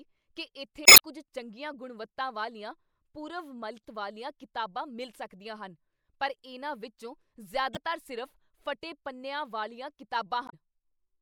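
Damaged data in the compressed stream makes the decoder misread frames, lose sync and hunt for the next valid frame header, so each hit comes out as a short chirp or blip breaking into the speech. It first happens from 0.83 to 1.0 s, just before "ਕੁੱਝ ਚੰਗੀਆਂ ਗੁਣਵੱਤਾ ਵਾਲੀਆਂ". Briefer hits follow at 3.81 to 3.85 s, after "ਚੰਗੀਆਂ ਗੁਣਵੱਤਾ ਵਾਲੀਆਂ ਪੂਰਵ", and at 7.73 to 7.77 s, after "ਪਰ ਇਹਨਾਂ ਵਿੱਚੋਂ". The last falls at 10.46 to 10.54 s.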